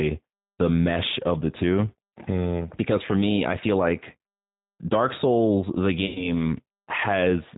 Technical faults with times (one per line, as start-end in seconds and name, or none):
0.00-7.58 G.729 codec
6.06-6.30 VoIP packet loss concealed by the speech codec